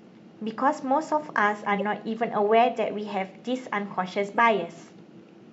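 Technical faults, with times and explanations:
1.79–1.82 s and 4.37 s, corrupt frame decoded: two short chirpy blips cut into the speech, each lasting a few frames. The decoder played damaged frames with misread gains or codes, putting stray energy at the wrong frequencies, peaking around -20 dBFS.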